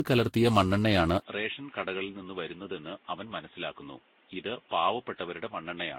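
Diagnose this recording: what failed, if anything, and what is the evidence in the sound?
The codec stage failed, repeatedly. Across the whole clip the speech has a swirly, smeared, hollow quality, and consonant onsets blur. Nothing is present above 16.8 kHz. This is generation loss: the audio was likely decoded and re-encoded many times, around seven passes. The character fits a Vorbis chain at roughly 40 kbit/s. Each pass quantises on a shifted frame grid, so the noise and spectral gaps pile up with every encode.

At 1.2 s, just after "കലർത്തിയ മണ്ണെണ്ണയാണ്", there is a silence of 20 ms. Then the sound turns dull and boxy until the end. From that point nothing is present above 3.8 kHz. The level drops by about 10 dB, and a new noise floor appears, roughly 30 dB below the speech. This is an input switched to a poorer device at the driver stage. The likely cause is a narrowband headset or second microphone taking over mid-recording.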